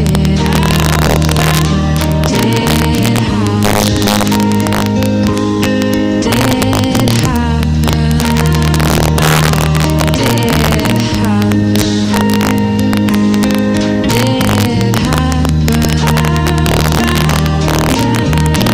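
Right through the clip there's integer overflow: the signal is pushed about 4 dB past full scale, and instead of clamping, the samples over the limit, well under one percent of them, wrap to the opposite extreme. You get harsh, violent cracks on the loudest peaks, much nastier than ordinary clipping.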